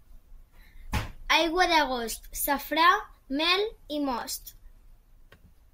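At 4.18 to 4.22 s the speech briefly jumbles. These are chunks out of order: one 10 ms block arrived late and played three chunks after its proper place, leaving nothing missing but creating three abrupt joins.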